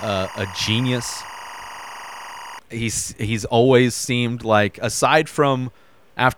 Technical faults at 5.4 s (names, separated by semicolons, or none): none